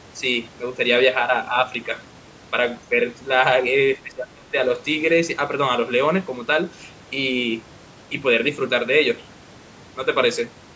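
At 2.89 to 2.95 s the speech briefly sags by a small amount. At 3.98 to 4.55 s it drops much more deeply, roughly 25 dB down, for about half a second. This is likely speech suppressed in double talk: with both sides speaking at once, the echo canceller could not tell this talker from the loudspeaker echo and turned everything down. The call microphone processing limits the audio to 8 kHz.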